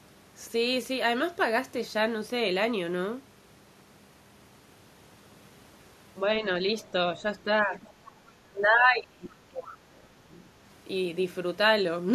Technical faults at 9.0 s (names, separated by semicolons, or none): speech suppressed in double talk